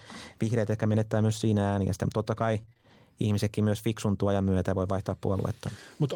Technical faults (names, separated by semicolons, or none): repeated packet loss (robotic sound)